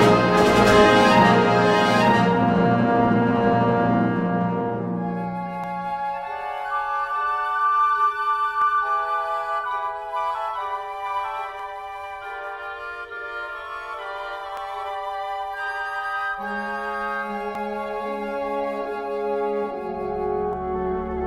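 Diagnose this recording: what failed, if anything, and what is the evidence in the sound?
A doubled audio track runs throughout: a full-band copy at roughly equal level trails by about one second, likely from a second capture path. On a spectrogram, every event repeats, shifted.

Audio missing between chunks skips at 2.66, 5.64, 8.62, 11.60, 14.57, 17.55 and 20.53 s. About 20 ms vanishes every 3 s, likely at recorder buffer handovers. On a waveform, these show as abrupt splices.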